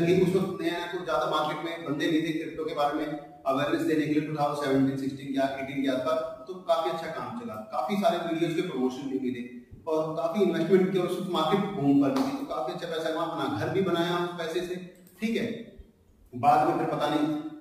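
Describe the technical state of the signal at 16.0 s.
At 16.0 s the signal is intact, with no dropout, clipping, glitch or other fault audible at that moment.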